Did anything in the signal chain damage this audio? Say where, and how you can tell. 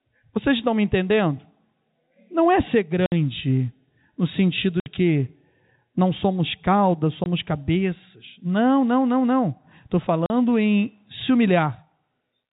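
Yes. Packet loss filled with silence, a network-stage fault, cuts the speech at 3.06–3.12 s, 4.80–4.86 s, 7.24–7.26 s and 10.26–10.30 s. The gaps last 60, 60, 20 and 40 ms, all multiples of 20 ms, which fits lost 20 ms packets. The receiver inserted digital silence rather than concealing the loss, so each hole starts and ends abruptly with hard edges. The G.711 telephone band limit at 4 kHz is audible too.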